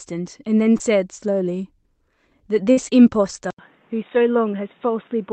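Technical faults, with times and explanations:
0.77–0.82 s, short concealed packet loss: about 20 ms of audio never arrived in time, so the receiver extended the preceding sound for roughly 23 ms and blended back into the real signal. It comes across as a brief smear or wobble.
2.72–2.79 s, burst of packet loss: about 60 ms went missing in a row. The decoder carried the last sound forward for around 54 ms while fading it, giving a held buzz or dying hiss, then the audio picks up further on with that stretch gone.
3.51 s to the end, input switched to a poorer device: after an 80 ms silence the sound turns dull and boxy, with nothing above 3.8 kHz, a level drop of about 5 dB and new background noise roughly 35 dB below the signal. This likely comes from the input changing to a narrower-band microphone or headset call profile.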